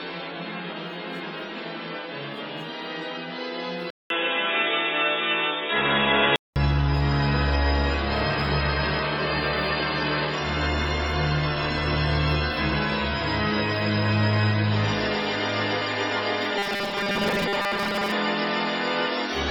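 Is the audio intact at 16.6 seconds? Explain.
No, at 16.58 s there's robotic sound from repeated short buffers until 18.12 s. It's a rigid, metallic buzz pinned at 200 Hz, likely from new audio arriving too seldom, so a 5 ms chunk gets looped in place of roughly 70% of the real sound.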